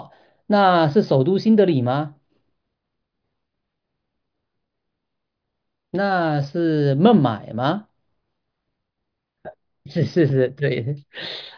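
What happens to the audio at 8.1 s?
Nothing goes wrong at 8.1 s: the speech carries on intact through that moment, with no dropout, click or distortion to be heard.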